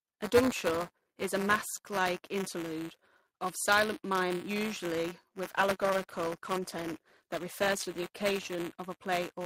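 From the start of this speech clip to its end, buffer tearing is present: the software writing the playback ring buffer and the hardware reading it have drifted out of step, so they collide inside every period. A small slice of each buffer, about a twentieth, carries audio from roughly 15 ms earlier, spliced in with abrupt joins at both edges. The result is a steady robotic rattle at about 188 Hz, which fits a 256-sample buffer, heard only while sound is playing.

At 5.47 s, just after "of silent mime usually", a call bitrate drop sets in. The bandwidth estimate collapsed and the encoder was pushed from 64 kbps down to 20 kbps, staying at the bottom for about 3.1 s. Coding at that rate is much coarser and the upper frequencies are trimmed away, so the speech turns muffled and watery, with a rough edge on top of the rattle, until quality returns at 8.64 s.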